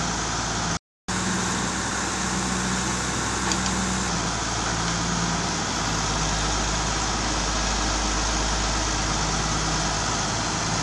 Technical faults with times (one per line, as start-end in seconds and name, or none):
0.77-1.09 playback stall
1.09-4.09 catch-up at higher speed